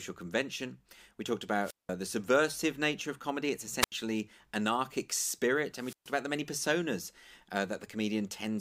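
The speech breaks up three times from wireless microphone squelch dropout. The first comes at 1.62 s and lasts until 1.91 s. A hole of about 186 ms sits inside it. The second runs from 3.80 to 3.92 s, with a shorter 81 ms gap. The third spans 5.76 to 6.17 s and mutes for about 130 ms. Each time the radio link weakens and hiss rises. The receiver's squelch then cuts the output to near silence before the voice returns.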